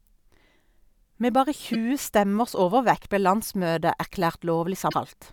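At 1.73–1.75 s, just before "stemmers overvekt ble", and again at 4.87–4.94 s, damaged data in the compressed stream makes the decoder misread frames and lose sync, giving brief glitches heard as a chirp, squawk, click or short hole that appear as broadband vertical smears and abrupt waveform discontinuities.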